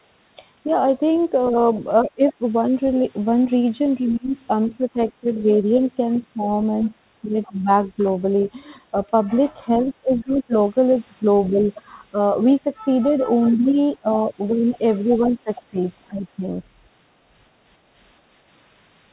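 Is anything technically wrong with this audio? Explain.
Yes, there are two kinds of trouble here, and they tend to show up together.

First, there's the other side's voice leaking through. A second, fainter voice sits under the main talker at 1.19 to 2.32 s, 6.83 to 7.49 s, 10.22 to 11.64 s and 13.96 to 15.62 s. It's roughly 20 to 30 dB below the speech, and it's quietest in the 6.83 s stretch. This is likely loudspeaker playback getting back into the mic that the echo canceller didn't fully scrub out.

Second, there's speech suppressed in double talk. The main voice dips, sometimes by around 20 to 25 dB, in chunks spread across 1.51 to 7.68 s (about a second and a half of it in total), 9.65 to 10.53 s and 13.99 to 16.43 s (roughly half a second each). Those windows overlap the leaks. So it's likely the canceller couldn't tell the near talker from the echo while both were active, and it pulled the whole signal down.

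The audio also has nothing above 4 kHz, which fits a narrowband telephone codec on the call path.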